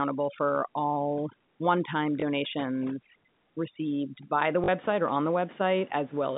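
From the start to about 4.40 s, a noise reduction stage set far too strong works on this speech. That is overdone noise removal. Any frequency band near its noise estimate gets pushed down or switched off, taking the quieter parts of the voice with it. The room noise, sitting about 21 dB under the speech, collapses into near silence with twinkling specks.

Inside that stretch, at 2.20 to 2.22 s, there is packet loss with last packet repeated. The 20 ms gap fits a single lost packet, and the receiver fills it by replaying the previous one. At 4.64 to 4.68 s the same fault repeats over 40 ms, which points to two lost packets in a row. Here the repeated copy buzzes at about 50 Hz and gives a brief robotic stutter.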